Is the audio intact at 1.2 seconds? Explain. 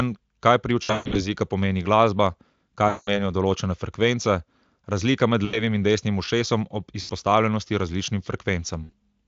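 No. At 1.2 seconds the audio sits inside a stretch of VoIP packet loss concealed by the speech codec, running from 0.83 to 1.28 s. About 260 ms of audio went missing across 320 ms, with the longest gap lasting 140 ms. The decoder filled each gap by extending its last pitch and spectral shape at falling gain. The speech smears into a buzzy tone or a coloured noise that fades, and stays weak or distorted for tens of milliseconds or more after the stream recovers.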